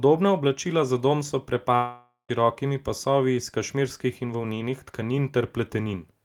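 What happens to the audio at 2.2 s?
At 2.2 s you're in the tail end of a long network dropout running from about 1.75 to 2.31 s, right after "oblačila za dom so." The speech cuts off and the receiver stretches the last sound into a fading buzzy hiss for about half a second, then there's a short stretch of near silence before the speech resumes. About 540 ms is simply gone, most likely because packets stopped arriving and the concealment ran out.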